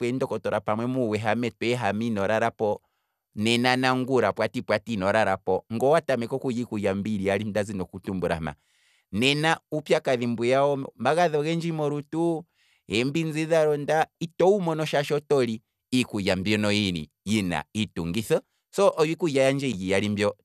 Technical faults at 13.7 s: none

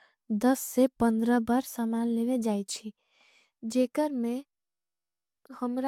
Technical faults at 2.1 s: none

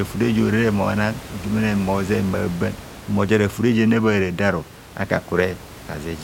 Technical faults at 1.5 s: none

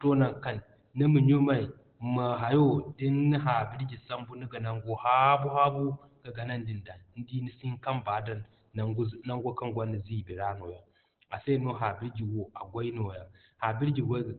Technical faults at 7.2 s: Opus compression

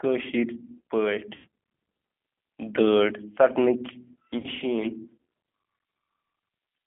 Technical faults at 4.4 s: G.729 codec; VoIP packet loss concealed by the speech codec

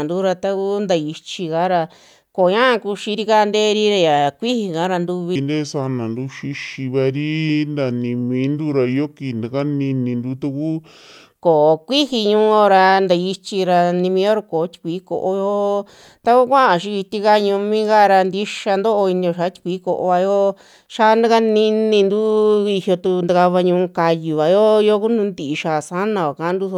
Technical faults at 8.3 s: section at the wrong speed

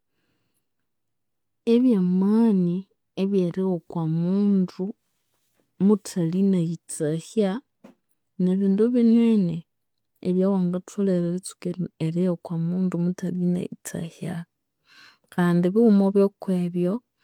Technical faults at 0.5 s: none

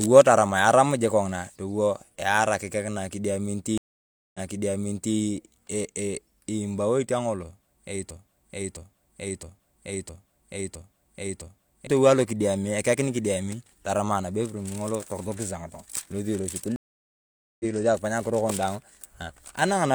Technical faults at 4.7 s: stream reconnect

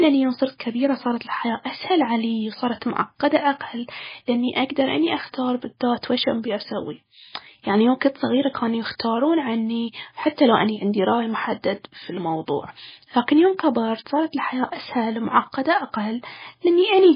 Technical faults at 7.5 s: MP3 compression

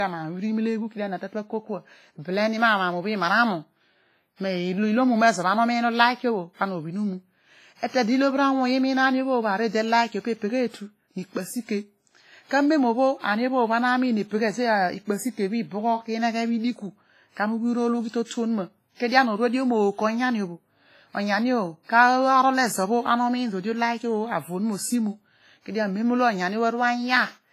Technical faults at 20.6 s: low-bitrate audio saved at a high bitrate

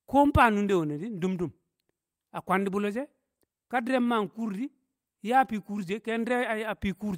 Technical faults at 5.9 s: clock drift between sender and receiver; repeated timing corrections

